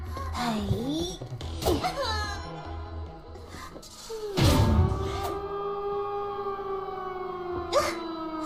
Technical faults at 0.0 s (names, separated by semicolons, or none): none